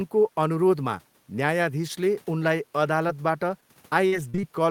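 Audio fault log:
3.07–3.11 s and 3.61–3.64 s, short concealed packet loss: about 20 ms of speech arrived too late each time, and the receiver continued the preceding sound before blending back. It is heard as a brief smear or wobble. On a spectrogram, harmonics extend unnaturally flat across a narrow slice before real audio resumes.
4.08–4.45 s, repeated packet loss (robotic sound): four separate gaps, the longest 43 ms, totalling about 120 ms missing, leave roughly 30% of this span patched by continuation. Repeated patching sounds choppy, with pieces missing. The spectrogram shows a stuttering pattern of frozen, smeared blocks with broken onsets, above a steady room-noise floor about 38 dB below the speech.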